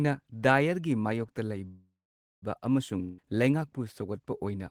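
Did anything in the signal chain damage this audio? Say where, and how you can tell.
Yes. At the network stage, a call audio freeze runs from 1.67 to 2.44 s. The speech fades into a buzz, then about 0.52 s of silence. It resumes intact but later, likely from held packets emptying the jitter buffer.

A long network dropout runs from 3.02 to 3.20 s. A fading fill covers about 0.16 s, and another 0.16 s of speech never returns, likely from packets lost outright.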